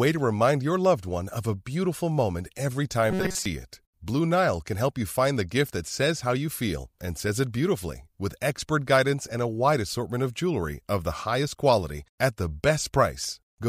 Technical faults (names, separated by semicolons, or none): robotic sound from repeated short buffers